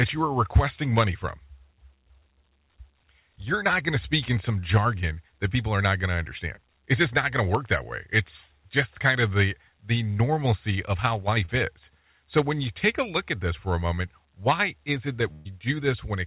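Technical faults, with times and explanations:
6.56–6.59 s and 11.45–11.50 s, short concealed packet loss: about 20 ms of audio each time never arrived, so the decoder extended the previous sound and blended back, leaving a brief smear.
15.33–15.47 s, burst of packet loss: about 120 ms went missing, and the receiver stretched the last sound across a 124 ms fill while fading it down before the audio resumes further along. The narrowband call path, with nothing above 4 kHz, points to a G.711-type telephony codec.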